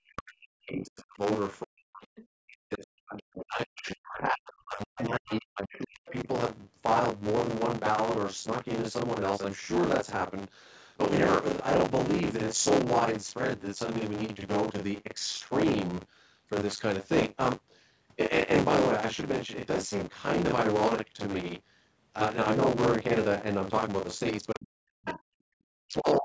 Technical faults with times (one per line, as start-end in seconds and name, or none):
0.00-26.24 buffer tearing
0.00-1.23 speech suppressed in double talk
1.62-2.08 speech suppressed in double talk
2.16-2.27 other side's voice leaking through
2.42-6.28 speech suppressed in double talk
5.74-5.78 other side's voice leaking through
24.53-25.36 speech suppressed in double talk
25.06-25.20 other side's voice leaking through
25.79-26.24 speech suppressed in double talk